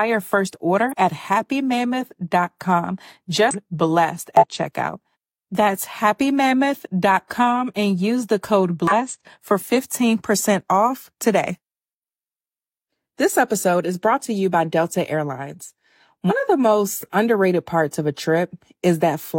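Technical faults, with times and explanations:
0.89–0.93 s, 3.49–3.55 s, 4.37–4.44 s, 8.87–8.93 s (just after "and use the code") and 16.26–16.32 s: damaged data in a compressed stream. Each is a brief disturbance of about 50–70 ms. Corrupted bytes make the decoder misread those frames and hunt for the next frame header.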